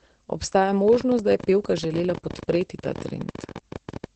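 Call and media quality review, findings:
Opus voice compression, whole clip: SILK-only coding at a rate that fits about 10 kb/s, coarse excitation. Band stops near 8.8 kHz; speech muffled, hoarse, faintly robotic, heavy codec damage throughout.

Train of clicks, 0.88 to 4.05 s: repeated near-identical pulses, likely interference or a struggling interface. Irregular ticking around 16 per second, some fifty clicks, peaks about 5 dB above the speech, audible in pauses too.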